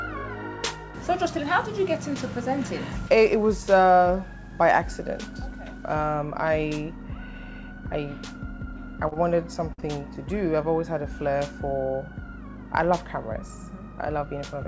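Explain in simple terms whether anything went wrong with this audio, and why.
Four short stalls from a late packet at 9.08, 9.14, 9.73 and 9.80 s: the sound briefly holds or stretches while waiting for delayed data, then resumes with nothing lost.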